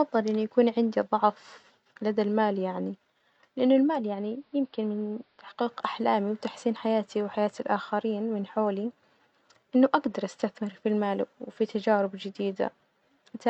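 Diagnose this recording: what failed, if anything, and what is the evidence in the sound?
From 3.83 to 5.72 s the speech turns dull, about 3 dB quieter, with faint hiss roughly 40 dB down, easing in and out over 0.35 s before "أحلامي وتحسين حياتي وحياة". This is digital radio blending to analogue: the receiver lost the digital signal and cross-faded to the AM broadcast.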